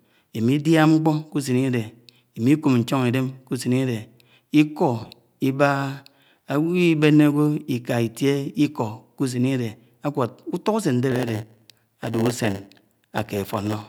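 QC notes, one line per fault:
11.11–13.88 s, block size mismatch (padded): a steady 100 Hz buzz sits on the speech while it drags to about 0.92 of normal speed, with the timbre left unchanged. Each block arriving downstream is roughly 8% short, and the missing part is filled with silence, so a brief gap recurs every 10 ms. Random dropouts would not have that regular buzz, and a clock or resampling error would move the pitch along with the speed.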